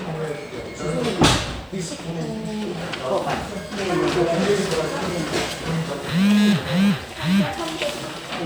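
No technical faults can be heard anywhere in the recording; the signal stays continuous and intact throughout.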